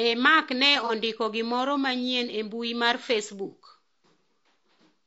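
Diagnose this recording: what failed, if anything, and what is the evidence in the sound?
The codec stage shows wear throughout: the speech is rough and grainy, with noise filling the gaps between harmonics and a thin, synthetic-sounding top band. That likely points to low-delay AAC compression (AAC-ELD), whose short frames smear pitch detail, which fits a bitrate around 32 kbps. Unlike noise from analogue wiring, the grain follows the speech and does not hiss in pauses.

From 0.86 to 0.91 s, just before "ondiko gimoro manyien e", a brief smeared, phasey patch replaces the sound. This is AAC frame loss with concealment at the network or decoder stage. About 30 ms was rebuilt from the previous spectrum, which fits a single lost frame. Because concealment fills the gap, there is no hard dropout.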